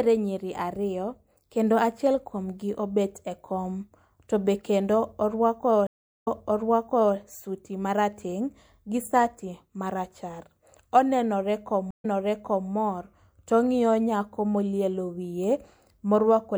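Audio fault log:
5.87–7.15 s and 11.91–12.69 s, stream reconnect: the speech drops out, after "to be kendo orwako" in the first case, for about 0.4 s and 0.13 s respectively. It then resumes about 0.89 s and 0.65 s earlier than where it stopped, so a stretch is heard twice. The connection broke, the player reconnected and restarted decoding, and the server resent a burst of recent audio.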